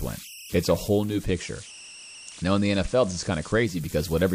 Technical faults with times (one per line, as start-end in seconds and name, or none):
0.00-4.34 converter idle tones
0.93-3.98 digital radio blending to analogue